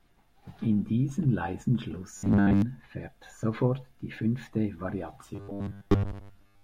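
Speech, with robotic sound from repeated short buffers twice. From 2.17 to 2.62 s, just before "fährt sofort die fünfte", the sound becomes a rigid metallic buzz at 100 Hz. It returns from 5.35 to 6.63 s, right after those same words. The likely cause is audio arriving too seldom. A 10 ms slice gets looped to fill the gaps, and most of the real signal is skipped. The wording stays only roughly traceable.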